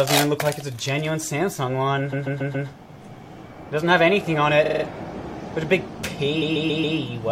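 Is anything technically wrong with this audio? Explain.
Yes, there are repeated frames. A short run of compressed frames was sent more than once, so the decoder plays the same slice of audio again. From 2.12 to 2.67 s a 139 ms block plays four extra times, which fits about six frames of roughly 23 ms. From 4.65 to 4.83 s a 46 ms block repeats four times, and from 6.41 to 6.97 s a 139 ms block again plays four extra times. Each event is heard as a stutter, and together they add about 1.3 s.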